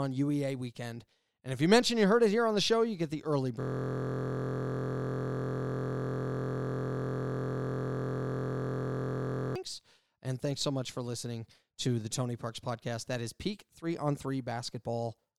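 From 3.61 s to 9.56 s the speech gives way to a steady buzz at about 43.1 Hz: a system hang loop. The system froze while the hardware kept replaying one 23.22 ms buffer, which fits a 1024-sample ring buffer, hundreds of times over.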